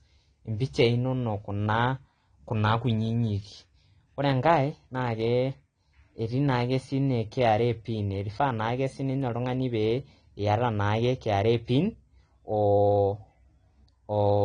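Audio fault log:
throughout, AAC compression: dull, smeared speech, fizzy sibilants; spectrogram shows a low cut-off, likely AAC-LC coding at roughly 32 kbps.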